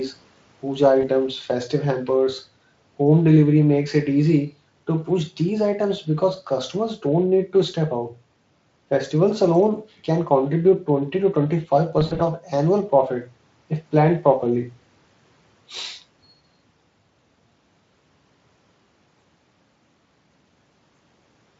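VoIP packet loss concealed by the speech codec, at 1.01 to 1.06 s and again at 11.99 to 12.22 s: the decoder fills gaps by extending its last pitch and filter with falling gain. First a 20 ms dropout, then about 120 ms lost across 200 ms, longest 60 ms, each smeared into a buzzy tone or coloured noise that fades, over the Speex speech.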